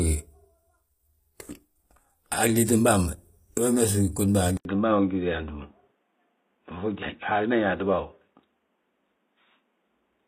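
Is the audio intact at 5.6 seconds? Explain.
No. The sound likely switched to a poorer input device at 4.57 s, after an 80 ms silence. From there to the end, nothing passes above 3.8 kHz, so it turns dull and boxy.

It also carries plainly audible damage that points to likely HE-AAC compression at a low bitrate. The rebuilt treble stops at 15.5 kHz and sounds gritty and metallic.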